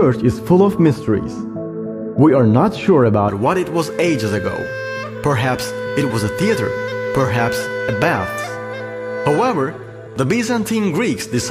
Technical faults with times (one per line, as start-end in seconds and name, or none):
0.00-3.29 de-emphasis applied wrongly